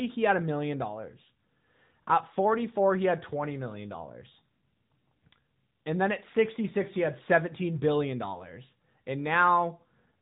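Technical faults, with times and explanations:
Throughout: AMR narrowband mobile codec. Nothing above about 3.8 kHz survives, so the speech sounds boxed-in and telephone-like. The vocal-tract model plus pulse excitation leaves a plainly audible buzzy, synthetic edge, which fits a mid-rate mode around 10.2 kbps.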